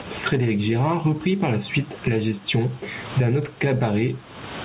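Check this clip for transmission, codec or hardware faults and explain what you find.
One fault runs through the whole speech clip: gain pumping. The level breathes continuously, a swing of around 20 dB. The likely cause is input gain set far too high for the microphone, so a fast limiter or compressor clamps down on each loud syllable and releases in the gaps. Loud and quiet passages are squeezed together, and the speech sounds flattened and crowded. The room noise sits about 36 dB below the speech, and the band stops at 4 kHz, consistent with a narrowband G.711 call path.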